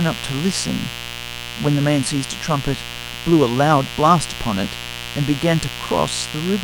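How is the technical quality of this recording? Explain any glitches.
The recording carries a continuous mains buzz under the speech from start to finish. Sharp switching spikes, likely from a dimmer, rectifier or missing shield, enter twice per 60 Hz cycle, stacking harmonics into the kilohertz range. The result is a steady, raspy buzz sitting only about 10 dB below the speech.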